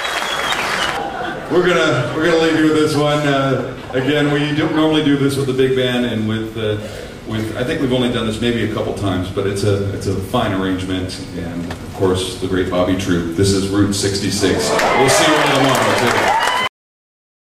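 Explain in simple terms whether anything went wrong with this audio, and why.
Yes, there is a cut-off end: at 16.68 s the sound stops mid-way into dead silence, with no natural fade or tail, unlike a deliberate ending.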